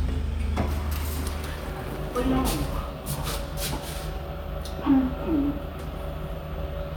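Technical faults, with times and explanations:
Nothing stood out on listening to these sounds.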